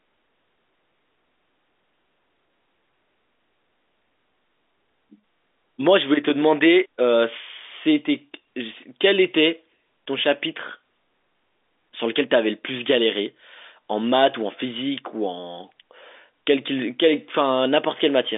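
No technical faults can be heard in this speech recording, which carries the narrow band of a G.711 A-law telephone line at 64 kbps, roughly 250 Hz to 3.6 kHz with nothing above 3.8 kHz, and that telephone coding is working as it should.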